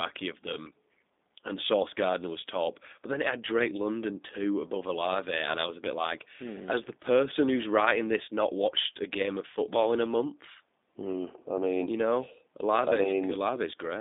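Throughout, the speech has been squeezed through a G.729 codec, rebuilt from a vocal tract model, a pitch predictor and a few pulses per frame, which fits an 8 kbit/s stream. Nothing survives above 3.8 kHz or much below 200 Hz, and the reconstruction sounds plainly coarse and artificial.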